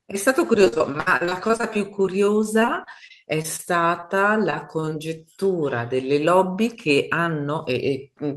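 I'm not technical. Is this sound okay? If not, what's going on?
No, the speech has several network faults.

Repeated packet loss (robotic sound) occurs from 0.61 to 1.65 s, from 2.02 to 3.61 s, and from 4.51 to 4.93 s. Bits of the call kept going missing. The phone filled each gap by stretching the last sound. That makes the voice choppy and robotic. The first stretch is worst: almost a third of it is patched.

A jitter buffer slow-down runs from 1.78 to 2.58 s. The phone was short of stored audio. It repeated tiny slices of sound to buy time. Speech plays at 95% speed there, slightly drawn out, without the pitch dropping.

A short concealed packet loss happens from 4.01 to 4.04 s. About 20 ms of sound never arrived. The phone covered the hole with a guess based on the previous sound. You may hear a quick smear or wobble.

Right after it, from 4.06 to 4.21 s, comes a short stall from a late packet. 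A piece of the call arrived late. The phone held the current sound about 21 ms longer while it waited. Nothing is lost, but one sound lingers.

A jitter buffer speed-up runs from 6.93 to 7.90 s. Too much audio had piled up waiting. The phone trimmed out tiny slices, around 70 ms in total. Speech plays about 6% faster and sounds a little hurried, at the same pitch.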